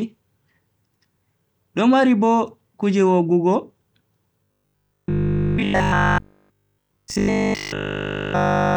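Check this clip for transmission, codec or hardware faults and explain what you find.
One fault is present: robotic sound from repeated short buffers, running from 4.44 s to 8.76 s. Across that whole stretch, essentially all of the output is repeated material. The speech is likely being starved of fresh data, so the playback side keeps looping its last short buffer while the real signal is dropped. The loop imposes a fixed 50 Hz buzz, which fits a buffer about 20 ms long, and the speech becomes a rigid, metallic drone that only loosely tracks what is being said.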